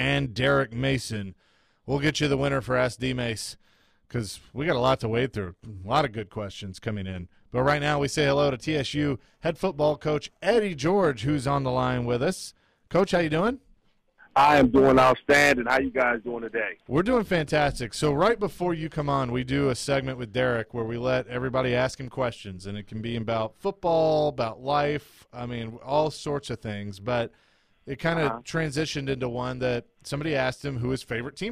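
Overlap-add ripple runs through the whole clip: the level swells and dips by about 6 dB at a rate of around 200 times a second, giving the audio a metallic buzz with extra tones around each note. The sound was evidently split into windowed frames and rebuilt with an overlap whose windows do not add up to a constant gain, so every frame boundary leaves a periodic bump in loudness at the frame rate.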